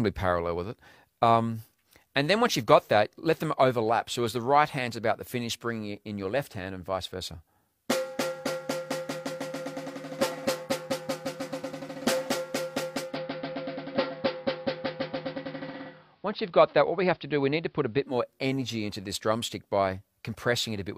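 From 13.0 to 18.2 s, digital radio blending to analogue: a 170 ms cross-fade to AM leaves faint hiss, with level unchanged.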